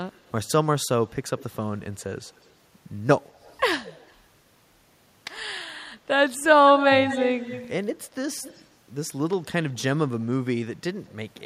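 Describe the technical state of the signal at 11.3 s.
At 11.3 s the signal is intact, with no audible fault at that moment.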